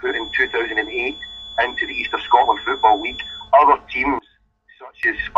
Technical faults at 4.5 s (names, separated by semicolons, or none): one channel inverted